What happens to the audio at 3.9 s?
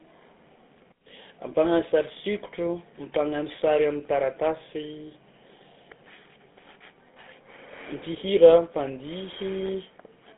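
At 3.9 s you're hearing the GSM full-rate codec, which runs through the whole clip. It rebuilds the speech from a vocal-tract model driven by coarse pulses, in a narrow 200 Hz to 3.6 kHz band, so the voice comes out buzzy and gravelly, consistent with a 13 kbps GSM coder.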